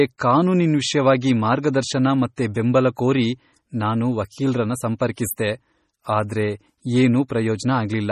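A speech recording carries heavy coding damage throughout. Nothing sounds above 16.3 kHz, and weak detail swirls and chirps, which fits MP3 compression at a low bitrate around 32 kbps. Pre-echo appears from 5.15 to 5.18 s, just after "ಬೆಂಬಲ ಕೋರಿ ನಾನು ವಕೀಲ್ರನ್ನ", and again at 7.28 s. Each time a brief hiss leads a sharp onset. The coding noise has spread backwards by about 22 ms and 16 ms, softening the attacks.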